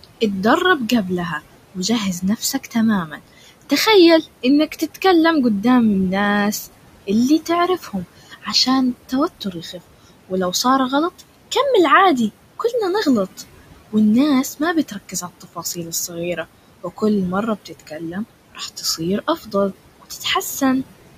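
Noise suppressor artifacts run the whole way through. The suppressor pulls the room noise, sitting about 17 dB under the speech, down by about 18 dB, so it sinks between words and surfaces under them. Speech cut by the noise suppressor shows up at 1.75–3.72, 4.43–5.04, 7.07–10.65, 14.59–17.02 and 17.65–20.62 s. In each span, short quiet stretches get treated as noise and dropped by up to about 15 dB, so they sound swallowed.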